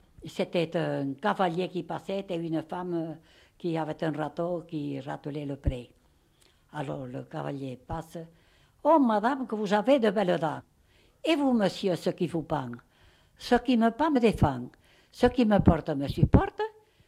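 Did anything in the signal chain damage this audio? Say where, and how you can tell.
Yes. The converter's sample clock is unstable, giving sample clock jitter of around a microsecond throughout. Samples land slightly early or late, so the error tracks the waveform's slope. It is heard as a faint roughness about 50 dB under the sound, rising on loud, bright passages and vanishing in silence.

At decode, compressed frames were skipped: the frames were missing or rejected as damaged, so playback jumps forward. At 10.59 to 10.61 s roughly a fifth of a second vanishes, and at 14.15 s roughly 70 ms.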